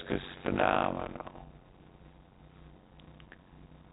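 A steady buzz near 92 Hz runs under the speech from start to finish, and the talking is drawn out to about 0.53 times normal speed while its timbre stays. This is a block size mismatch with padding: one stage hands over shorter blocks than the next one reads, which fits 256-sample writes, and each block is topped up with silence. The gap recurs at the block rate as the buzz and stretches the timing. The G.711 A-law telephone band limit is audible beneath this.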